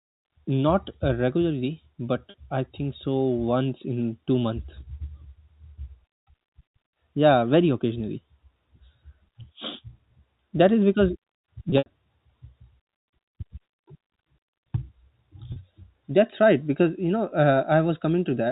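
Telephone-band speech, G.711-limited to 4 kHz, with packet loss with pitch repetition in three places. At 2.30 s, between "uh regularly but" and "I think so", and again at 15.52 s, about 40 ms goes missing, which fits two 20 ms packets, and is bridged by a briefly held, buzzy tone. After "is because" at 11.70–11.86 s, 100 ms is lost in bursts, the longest 80 ms, so the repeated period fades toward silence before speech cross-fades back. A plain dropout would be silent instead.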